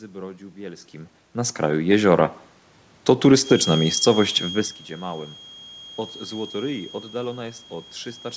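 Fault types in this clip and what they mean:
Automatic gain rising: the gain control judged the input too quiet and turned its gain up steadily, by about 6 dB between 0.91 and 2.42 s. Because the boost applies to the whole signal, the speech and the room noise behind it swell together over that second and a half, rather than the voice alone changing level as it does when the talker shifts position near 1.0 s.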